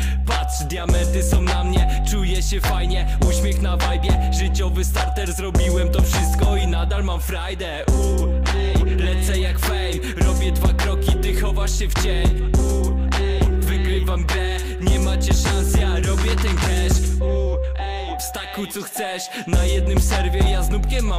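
No dropouts, clicks, distortion or timing errors are audible at any point in the recording.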